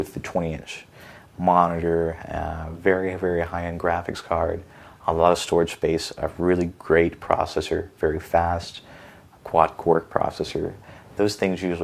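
No technical faults are audible.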